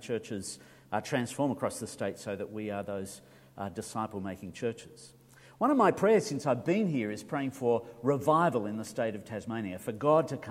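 No technical faults are audible.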